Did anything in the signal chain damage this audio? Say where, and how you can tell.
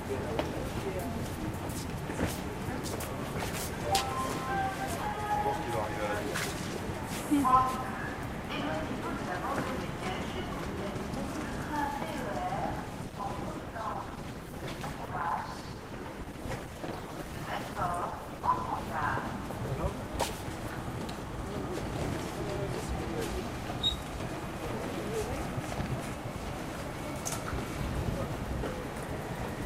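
Yes. At the network and codec stage, an adaptive stream at a lower bitrate took over from 13.03 to 19.03 s: treble abruptly thins and turns swirly with no gap, consistent with Opus dropping from about 64 to 16 kbit/s. A spectrogram shows the high band sharply cut, then restored.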